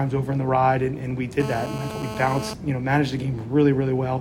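From 1.40 to 2.54 s a GSM phone buzz sits about 10 dB below the sound: a steady, raspy 217 Hz pulse train from a nearby handset on a call, showing as evenly spaced harmonic lines on a spectrogram.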